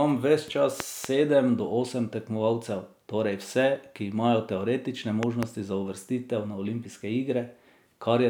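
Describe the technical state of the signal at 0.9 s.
A loud pop spans 0.80 to 1.07 s: two sharp thumps about 20 dB above the speech, which carries on underneath. It is likely a sudden voltage step, from a plug, switch or static discharge, shaped by the circuits downstream into brief pulses.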